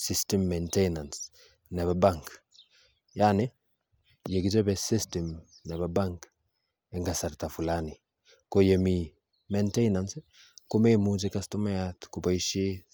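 Nothing stood out as a technical problem anywhere in the recording on listening.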